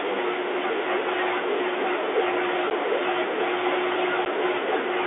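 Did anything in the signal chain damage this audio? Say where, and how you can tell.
Yes, the network stage did. There's packet loss filled with silence at 2.7 s and again at 4.25 s, each a hard 10 ms hole, which fits one lost packet being replaced by dead air. The telephone-band G.711 coding underneath sounds clean.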